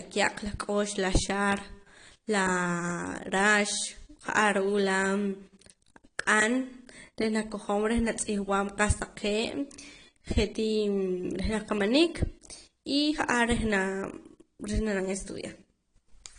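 From start to finish the speech sounds dull and smeared, with a watery, warbling texture on sustained vowels and a fizzy, swirling edge on sibilants. This is likely AAC compression at a low bitrate, in a way that fits AAC-LC at around 32 kbps. The encoder has dropped everything above 10 kHz and coarsely quantised what remains. On a spectrogram, energy stops sharply at 10 kHz, and patchy holes and blotchy noise-filled regions appear in the upper bands.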